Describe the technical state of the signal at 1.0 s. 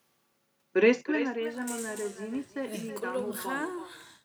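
At 1.0 s a fine ticking, zipping texture rides on the speech. This is zipper noise, running from 0.85 to 1.34 s: the level drops by roughly 15 dB in unsmoothed steps, about a hundred per second, and each step leaves a tiny click.

Under it, the speech is trailed by a quieter, thinner copy about 12 dB down, arriving roughly a third of a second later. This is echo with no canceller: the far end's loudspeaker output is picked up again and returned uncancelled.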